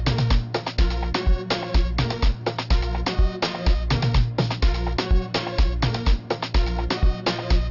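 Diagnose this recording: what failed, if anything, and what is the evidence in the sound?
Aliasing from a sample-rate conversion, consistent with unfiltered downsampling to 12 kHz: throughout, content above 6 kHz folds back as fairly strong gritty, metallic tones.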